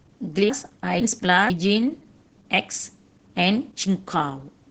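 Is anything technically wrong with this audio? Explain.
Yes, two faults can be heard.

Opus voice compression runs through the whole clip. The speech is coded with Opus's SILK linear-prediction mode, which models the voice as a filter driven by a coarsely quantised excitation. The damage is heavy and points to a low bitrate of around 10 kbps in 20 ms frames. The band stops at about 8 kHz, and the coarse excitation makes the speech sound muffled, hoarse and slightly robotic.

Chunks out of order occur between 0.5 and 1.5 s. The audio there consists of two 500 ms chunks, and the first arrived one chunk late, so it plays after the chunk that should follow it. No audio is missing, but the sequence is scrambled, leaving hard joins at 0.5, 1.0 and 1.5 s. This is heard as a jumbled, garbled second of speech.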